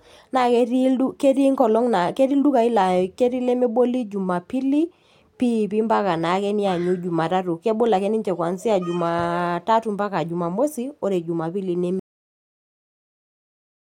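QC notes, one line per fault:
12.0–13.9 s, cut-off end: right after "oore jumapili" the speech stops mid-sound and drops straight to digital silence, because the final buffers were never written or played.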